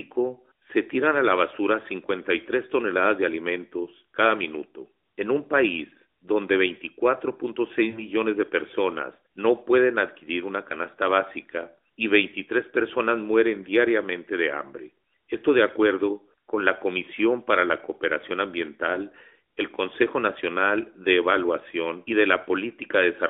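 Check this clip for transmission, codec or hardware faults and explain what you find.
There are three brief dropouts in this speech, all lost AMR speech frames, heard through a narrowband AMR-NB mobile channel limited to roughly 250 Hz to 3.7 kHz.

At 3.84 to 3.90 s, between "toneladas de" and "cada minuto", and again at 18.94 to 18.99 s, the voice gives a short dip and warble that points to one lost 20 ms frame. At 7.90 to 8.05 s, just before "de personas no pueden", the sound smears and fades for longer, which fits two consecutive lost frames, and then returns slightly rough. Radio errors made these frames fail their checksum. The decoder filled each gap by reusing the last good pitch and vocal-tract settings at falling gain.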